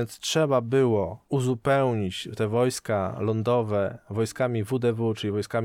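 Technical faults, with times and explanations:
No technical faults can be heard in this speech clip. Nothing in it calls for a time or an explanation.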